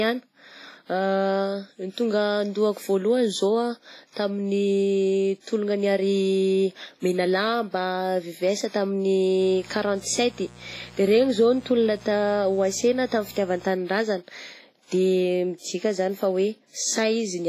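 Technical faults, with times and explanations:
Throughout, WMA compression. The speech carries heavy codec damage. It sounds ringing and washy, with a hiss that rises and falls with the voice. Nothing is present above 15.3 kHz. The likely cause is a transform codec run at a low bitrate, which fits about 24 kbps. Long blocks smear quantisation noise over tens of milliseconds around each sound. At that rate, weaker spectral lines are dropped outright, leaving gaps that wash and swirl.
9.40 to 13.67 s, mains buzz. A steady, raspy buzz sits under the speech for this stretch. Its base is 60 Hz. It stands about 25 dB below the speech. The rasp comes from sharp switching spikes, such as from a dimmer, a rectifier or a missing shield. They arrive twice in every mains cycle. Those spikes spread harmonics of 60 Hz up into several kilohertz, so the tone sounds edgy rather than a pure hum.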